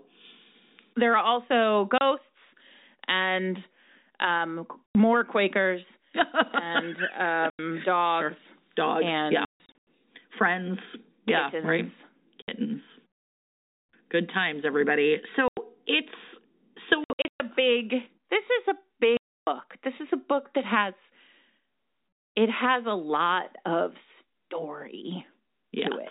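Packet loss filled with silence cuts the speech with holes at 1.98 s, 4.86–4.95 s after "and um", 7.50–7.59 s, 9.45–9.87 s in scattered gaps before "friends yeah", 12.42–12.48 s, 15.48–15.57 s, 17.04–17.40 s (also scattered), and 19.17–19.47 s after "is a". Gaps in multiples of 30 ms suggest 30 ms packets. The waveform drops to silence with vertical edges, and the telephone-band spectrogram shows blank columns.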